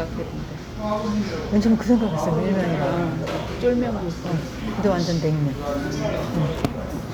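No technical faults can be heard anywhere in this recording of sounds, so there is nothing to describe in time order.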